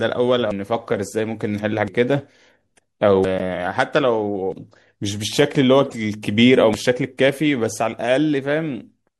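Speech with a watery, swirly edge and dulled treble throughout, likely MP3 compression at a bitrate that sounds like about 64 kbps. The audio jumps ahead at 0.51, 1.88, 3.24, 4.52 and 6.74 s, each losing a tenth to a third of a second, which is likely a dropped buffer (overrun). Then there's a corrupt frame decoded as a loud glitch at 3.39–3.41 s, and a quieter one across 5.85–5.95 s.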